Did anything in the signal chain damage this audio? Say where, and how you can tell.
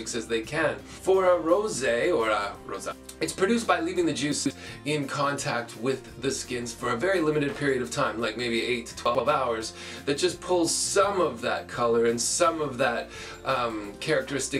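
Yes. At the buffer stage, the chunks are out of order twice: around 4.32 to 4.51 s one block of about 46 ms plays three blocks late, and around 9.06 to 9.20 s another plays two blocks late. The block length fits a 2048-sample buffer at 44.1 kHz. No audio is missing, but each misplaced block creates three hard joins, so the sound briefly jumbles and skips backward in time before carrying on.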